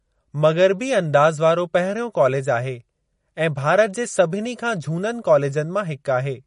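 Throughout the speech, the treble stops dead at 10.5 kHz, and the plainly audible watery, swirling texture is likely MP3 compression at a bitrate around 40 kbps. A spectrogram shows a flat ceiling with weak components flickering between frames.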